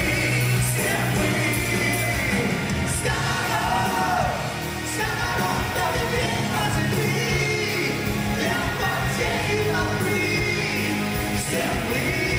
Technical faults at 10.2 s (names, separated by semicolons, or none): none